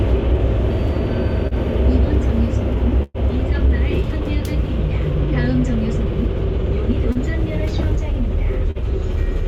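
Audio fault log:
1.47–1.54 s, 7.12–7.18 s, 8.71–8.78 s: short concealed packet loss. About 40 ms went missing each time. The receiver continued the preceding sound, leaving a brief smear.
3.03–3.17 s: burst of packet loss. About 120 ms never arrived. Roughly 110 ms was filled by extending and fading the last sound, with a 10 ms silence before the audio resumes further on.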